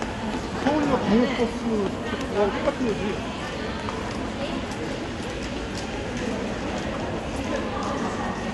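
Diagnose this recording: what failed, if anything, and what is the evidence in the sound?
The codec stage failed. Throughout, the sound is dull, with nothing above 11.5 kHz and a rough, fluttering noise around tones. This is likely Dolby Digital compression starved of bits, fitting about 64 kbps. A spectrogram shows a hard ceiling, with speckled dither filling the emptied bands.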